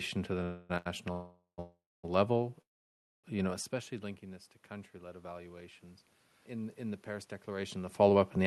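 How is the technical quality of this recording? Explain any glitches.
The recording has clear transport glitches early on, a gain swell in the middle and a rushed ending, all heard through an Opus call path whose audio stops at about 12 kHz.

Call audio freeze, at 0.43–0.71 s, 1.12–1.60 s, 1.60–2.05 s and 2.61–3.26 s. Packets were likely held up in transit, leaving the jitter buffer empty. After "to the", the last sound is stretched into a fading buzz. In the later freezes this buzz drops to silence for about 0.12, 0.25 and 0.6 s. Speech then resumes at "level you know especially" with nothing lost, only delayed.

Short stall from a late packet, at 0.77–0.88 s. One packet missed its slot, so the receiver held the previous sound for 81 ms until the packet arrived. The result is a briefly smeared, slightly buzzy sound rather than a gap.

Automatic gain rising, from 4.69 to 5.83 s. The input fell by about 16 dB, so the gain control raised its level by about 4 dB over roughly a second. 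The voice and background noise swell together.

Jitter buffer speed-up, from 7.33 to 8.45 s. The buffer held more audio than it aims for, so the receiver trimmed tiny pitch-period slices, about a tenth of a second in total. The speech runs at 107% speed with unchanged pitch and sounds slightly hurried.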